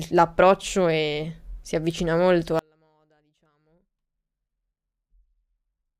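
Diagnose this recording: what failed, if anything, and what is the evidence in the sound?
Audio dropout to a faint residue from 2.59 s to the end: speech abruptly drops to a faint leak, likely a failed analogue connection feeding a live path.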